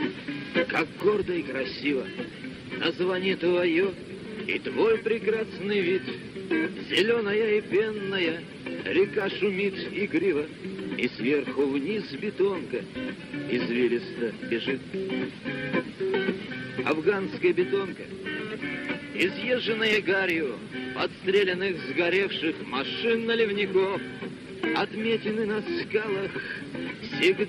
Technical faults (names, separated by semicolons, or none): word clock ticks